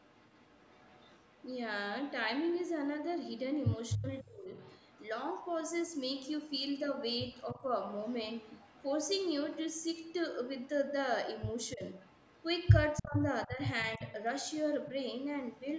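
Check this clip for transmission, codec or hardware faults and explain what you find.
Two call faults are audible: echo leak and speech suppressed in double talk.

Echo leak runs from 0.0 to 1.56 s and from 4.58 to 15.6 s. A faint copy of the speech trails it by 295 ms. It sits about 30 dB below the speech at first, then about 25 dB below. The likely cause is a loudspeaker on the far side whose echo canceller let some of its microphone pickup through.

Speech suppressed in double talk occurs at 3.97 to 4.53 s, 7.54 to 7.65 s and 11.74 to 14.03 s. The speech dips in pieces, by roughly 30 dB, then 10 dB, then 15 dB. It is likely an echo canceller confusing the talker with echo while both sides spoke, and ducking both.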